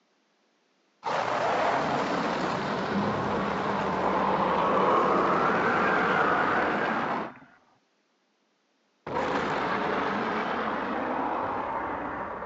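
No technical faults can be heard anywhere in the recording. Nothing in the audio stands out as a point needing a time or an explanation.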